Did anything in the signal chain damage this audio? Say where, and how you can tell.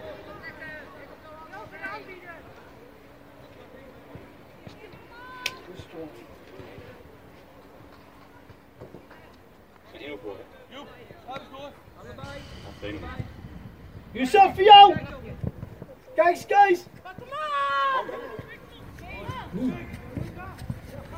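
Yes. The Bluetooth LE Audio link dropped frames between 2.49 and 2.52 s, a gap of 22.5 ms that fits about three 7.5 ms LC3 frames. This is lost LE Audio frames, a wireless transport fault. The LC3 decoder concealed the gap by reusing the last good spectrum with randomised phase signs, so tonal content briefly becomes a noisy smear. On a spectrogram, harmonic lines dissolve into a short broadband smudge. On the waveform, regular cycles give way to noise-like samples at a similar level. The light lossy coding elsewhere isn't part of this fault.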